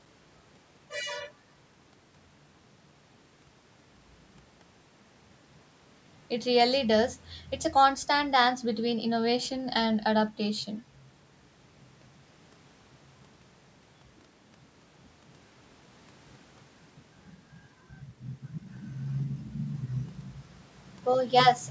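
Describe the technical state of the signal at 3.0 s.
At 3.0 s the speech signal is intact, carrying only the normal character of call microphone processing, with its low bass trimmed and nothing above 8 kHz.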